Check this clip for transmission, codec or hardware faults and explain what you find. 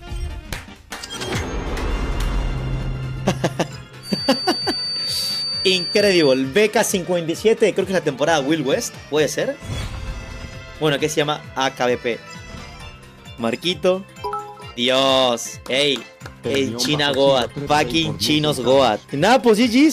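One fault stands out: a feedback whistle from 3.99 s to 6.44 s. A thin, steady tone at 4.6 kHz sits a little below the main sound, swelling and fading slowly in level. The likely cause is a loudspeaker-to-microphone loop held just at the edge of feedback, sustaining one frequency without building into a howl. On a spectrogram it appears as a single bright horizontal line at 4.6 kHz. The waveform shows little change.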